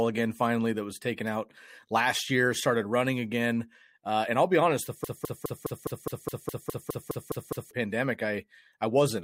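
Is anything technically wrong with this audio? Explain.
Yes. From 5.04 s to 7.71 s, right after "I'll be honest the", there is a broken-record loop. The likely cause is a player, encoder or stream that stalled and kept re-sending the last fragment it held. You hear a 0.21 s slice of speech repeated exactly, back to back, 13 times, as a mechanical stutter. Whatever audio should have played during those 2.7 seconds is lost.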